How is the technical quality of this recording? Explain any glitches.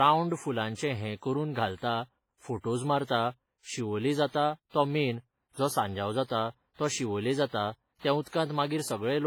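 The technical quality is limited by one fault that runs through the whole speech clip. It is low-bitrate audio saved at a high bitrate. The file is MP3 at a generous rate, but the sound does not match that. It carries the damage of a much weaker encoding, which fits an earlier pass through something like WMA at about 24 kbit/s. That is likely the cause. The later high-rate MP3 cannot restore what was already lost. It only preserves the existing artefacts. The spectrum reaches 20.2 kHz, but that width adds no real detail.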